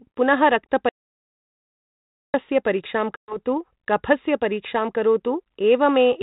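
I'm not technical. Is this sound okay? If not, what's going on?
No. From 0.89 to 2.34 s the speech cuts off abruptly and there is a gap of about a second and a half of total silence, with not even the faint background hiss of the room. That is an audio dropout to silence. The most likely cause is that the signal coming into the recorder was briefly lost, from a loose connection, a dropped link or an accidental mute, while the recorder kept writing nothing. Whatever was said then is gone.

A second, shorter problem comes at 3.16 to 3.37 s: a sharp-edged hole of about a tenth of a second, and when the speech returns it comes back slightly distorted and settles almost at once. This is packet loss on an ADPCM call. The audio travels in small chunks, and roughly ten of them never arrived. The phone-style codec carrying the call predicts each moment of sound from the last, so when the chunks went missing the receiving end lost track and needed a moment to catch up.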